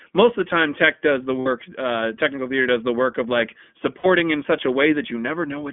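The whole speech clip runs through the iLBC codec, so it sits in a telephone-style band of roughly 200 Hz to 3.4 kHz, with nothing bright on top. The coding damage is plainly audible: a slightly rough, synthetic edge on the voice, since each short frame's excitation is coded on its own. The sound fits iLBC's 20 ms mode at around 15.2 kbps.

At about 1.40 to 1.48 s, right after "time tech does the", there are lost iLBC frames. The decoder fills the gap by repeating the last pitch cycle with some noise mixed in, so you hear a brief held, faintly buzzy vowel, about the length of three frames. It snaps back cleanly at "uh technical theater does". The same thing happens again at about 4.00 to 4.06 s, after "the work of like". This one is shorter, closer to two frames, with the same smeared vowel before "in such a" comes through intact.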